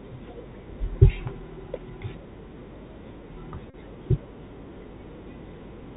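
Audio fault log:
Throughout, Bluetooth CVSD headset codec: the speech is squeezed into the narrowband headset link, which fits 64 kbps CVSD, so nothing above 4 kHz survives. A one-bit up-or-down coder lags on loud bright sounds, leaving scratchy s sounds and a granular hiss rather than the smeared swirl of a perceptual codec.
3.70 to 3.75 s, Bluetooth headset packet repeated: about 38 ms of the link dropped out, which points to roughly ten lost packets, and the last good packet was replayed over and over. That repetition every 3.75 ms gives a steady buzz near 267 Hz, not silence or a click.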